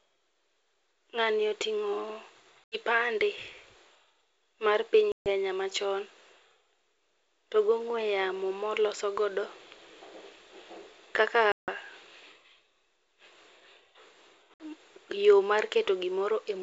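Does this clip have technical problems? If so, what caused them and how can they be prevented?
Yes: packet loss on an ADPCM call leaves hard-edged silent holes at 2.64 s (80 ms), 5.12 s (140 ms), 11.52 s (160 ms) and 14.54 s (60 ms). Unlike a plain dropout, speech returns slightly distorted while the decoder's predictor and step size resynchronise. Forward error correction or packet-loss concealment would prevent it.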